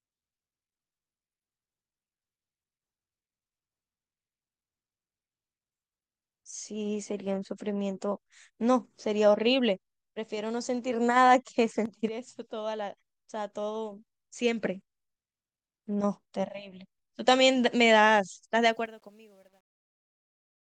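Speech recording with truncation distortion on a fade in the closing fade-out, which starts at about 18.6 s. From 18.62 s the tail turns grainy, and from 19.13 s to 20.69 s it is at its worst. The sound points to a fade stage keeping only about 10 bits without dither.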